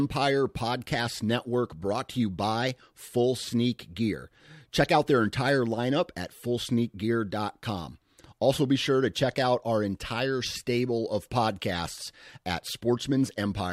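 No technical faults are audible anywhere in the speech recording.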